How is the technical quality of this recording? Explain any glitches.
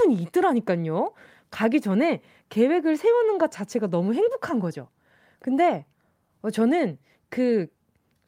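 No technical faults are audible.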